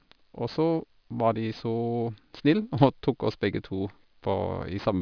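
Aliasing runs through the whole speech clip: the sample rate was dropped without an anti-aliasing filter first, and the sound points to a conversion from about 44.1 kHz down to around 11 kHz. Everything above the new 5.5 kHz limit folds back into the audible band at false, unrelated frequencies, sitting roughly 25 dB below the speech. Sibilants come out gritty and metallic, and the spectrum stays dense right up to the 5.5 kHz edge instead of rolling off.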